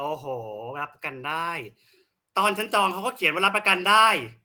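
Speech recording; no technical faults can be heard.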